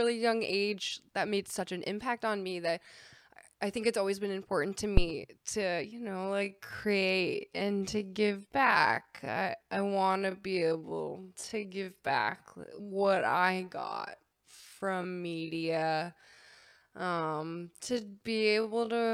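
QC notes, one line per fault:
4.97 to 5.07 s, phantom power thump: right after "always been important to" there's a deep thump that dies away in about 21 ms. That's the step from a supply switching on or off on a live input, passing straight through the coupling capacitors.
5.83 s to the end, time-stretched section: from just before "anyone the way that", the pace suddenly drops to about 0.55 times normal speed while the pitch stays put. It's likely software stretching the audio to fit a length, repeating short pieces to hold the pitch, which makes it drag.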